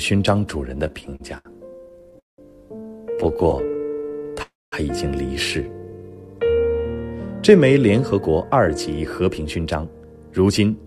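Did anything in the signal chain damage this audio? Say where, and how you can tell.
Yes. Repeated stalls (stutter) at 0.87–2.40 s (18 gaps, longest 191 ms) and 3.10–4.39 s (20 gaps, at most 15 ms): late packets kept emptying the jitter buffer, so the receiver stretched the last sound.

A call audio freeze at 4.42–4.74 s: sound is extended, then about 220 ms of silence, and playback resumes 0.3 s later. The likely cause is packets held up on the network.

Jitter buffer slow-down at 5.53–6.47 s: audio runs at 83% speed with pitch unchanged. Repeated pitch periods add 166 ms to refill the buffer.

Jitter buffer speed-up at 7.86–10.84 s: playback runs at 111% speed, hurried but at the same pitch. Trimmed pitch periods remove roughly 0.3 s of excess delay.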